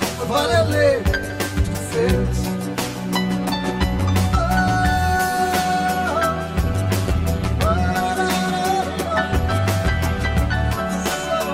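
From start to finish the sound carries channel delay (comb filtering): one channel trails the other by around 10 ms, and the mono sum cancels near 50 Hz and every 100 Hz above. It sounds hollow and phasey, and a spectrogram shows evenly spaced, fixed horizontal notch stripes.

Between 6.60 and 8.13 s, overlap-add ripple appears. Frames were rejoined with an overlap that doesn't sum flat, so the level swings by about 6 dB at roughly 200 Hz, heard as a metallic buzz with extra tones around each note. The waveform envelope shows a regular scalloped pattern.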